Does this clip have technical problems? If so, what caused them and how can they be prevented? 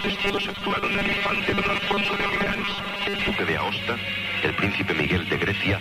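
Yes. From 0.01 to 3.35 s, new audio likely arrived too seldom, so short chunks were repeated most of the time. This produces robotic sound from repeated short buffers: a rigid, metallic 200 Hz buzz, which fits a 5 ms buffer. A larger jitter buffer and steadier audio delivery would prevent it.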